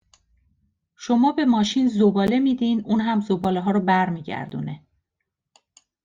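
At 2.27 s (after "شما به ماشین"), 3.44 s and 4.50 s, blocks of digital silence of 12, 6 and 16 ms cut hard to zero and back, the first two heard as ticks. The first two fit unfilled 512- and 256-sample buffers.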